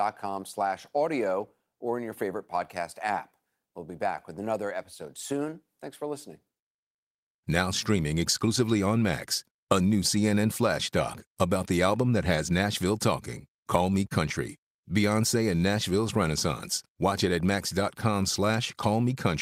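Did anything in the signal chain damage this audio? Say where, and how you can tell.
No, nothing in this speech recording stood out on listening as damage from any stage of the signal chain.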